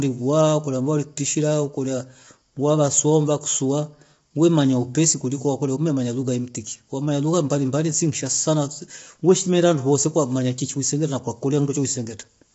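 Throughout the speech, voices sound rough and grainy, with noise filling the gaps between harmonics and nothing above 7.7 kHz. This is likely low-delay AAC compression: short frames blur pitch detail at a rate that fits roughly 24 kbps AAC-ELD.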